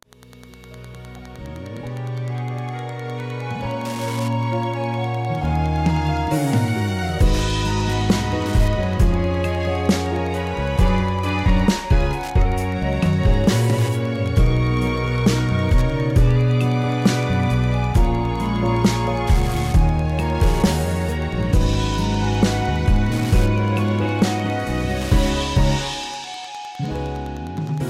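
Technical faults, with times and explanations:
Throughout, Wi-Fi interference: a nearby radio's beacon every 102.4 ms is rectified by the audio circuit, giving steady ticking about ten times a second, roughly 25 dB below the signal.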